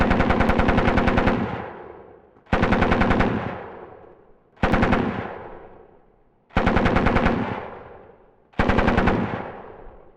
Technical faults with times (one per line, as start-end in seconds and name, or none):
7.41-8.95 drift correction step